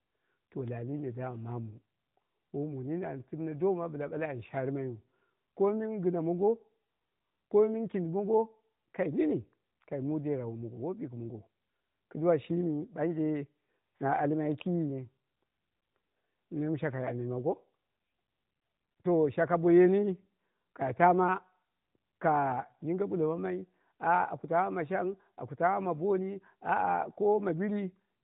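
From start to finish the speech passes through the AMR narrowband mobile codec, cut off above about 3.8 kHz and turned plainly buzzy and synthetic, which fits a mid-range mode near 10.2 kbps. That vocal-tract coding artefact, not just missing treble, separates it from simple band-limiting.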